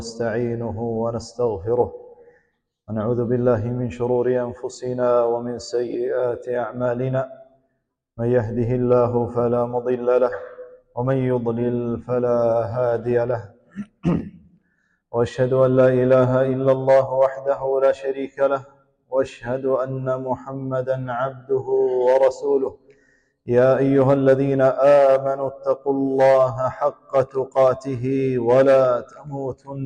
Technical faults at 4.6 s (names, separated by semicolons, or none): none